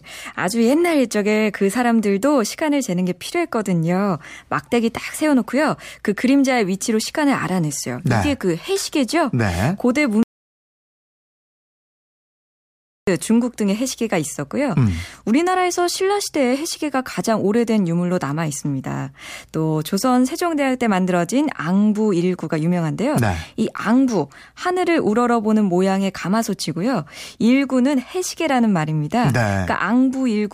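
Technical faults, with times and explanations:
10.23 to 13.07 s, audio dropout to silence: the speech cuts off abruptly mid-flow and returns just as abruptly about 2.84 s later, with what was said in between missing. The gap is silent, with no room tone or hiss at all, which sets it apart from a natural pause or a noise gate closing, both of which fade and leave some background. The likely cause is a lost input, such as a disconnected device or a stray mute.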